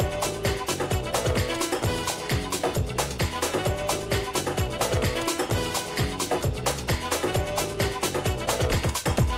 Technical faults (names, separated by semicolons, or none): clock drift between sender and receiver; repeated timing corrections